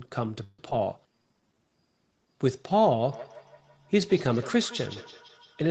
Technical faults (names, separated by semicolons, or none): call audio freeze; skip ahead; jitter buffer slow-down; feedback echo between two devices